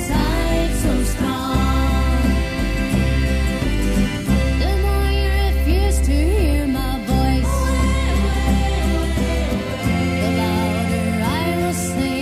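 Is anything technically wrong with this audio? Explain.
No, nothing is technically wrong with this audio.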